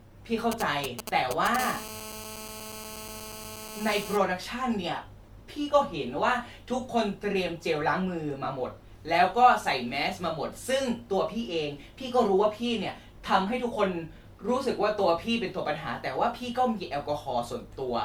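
Throughout the speech there is a swirly, smeared quality with a hollow tone and softened consonant attacks, more damage than a single moderate-rate encode would leave, though content still reaches about 20.1 kHz. This is likely generation loss: the audio seems to have been through lossy MP3 encoding and decoding about three times, fitting a chain near 96 kbit/s, with each pass requantising on a shifted frame grid so that noise and spectral gaps pile up.

From 0.52 to 1.56 s a galloping dit-dit-dit of short raspy buzzes cuts across the speech, loud enough to sit only a little below it. These are GSM signalling bursts: a nearby 2G phone sends brief groups of radio pulses at a 216.7 Hz rate while it signals to the network, and the audio circuitry rectifies them into audible buzz fragments.

At 1.59 s the pattern turns into a continuous hard, raspy buzz at 216.7 Hz with a dense stack of harmonics. 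It runs to 4.17 s, about 12 dB below the speech and unrelated to it. This is GSM phone buzz: the same phone is now in a call, transmitting its bursts 217 times a second, and the rectified pulse train comes through as a steady tone.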